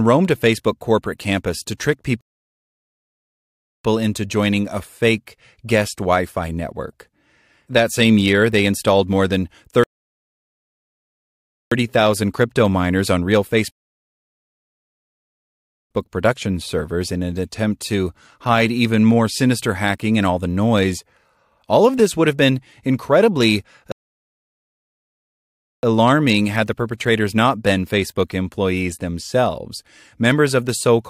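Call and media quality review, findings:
Rebuffering stall, four times. Player buffer runs dry and playback halts until more audio downloads. Speech cuts to silence, then resumes at the exact point it stopped. Nothing lost, time added. 2.21–3.84 s (1.64 s), after "corporate campus to trick", resuming on "into joining a fake". 9.84–11.72 s (1.88 s), after "they installed more than". 13.71–15.91 s (2.19 s). 23.92–25.83 s (1.91 s), after "would have been incredibly".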